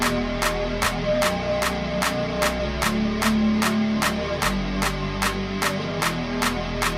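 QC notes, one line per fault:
0.84–0.86 s, chunks out of order: one 10 ms chunk plays a chunk late, so two adjacent slices swap places. There are three hard joins and the moment sounds briefly jumbled. Unlike a dropout, nothing is missing and there is no gap or silence.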